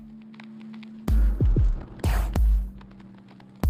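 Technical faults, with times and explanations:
0.9–3.70 s, call bitrate drop: the bandwidth estimate collapsed, forcing the encoder onto far fewer bits. The sound turns coarse and muffled, highs trimmed away, which fits a fall from 128 kbps to about 13 kbps, with the worst stretch lasting about 1.2 s.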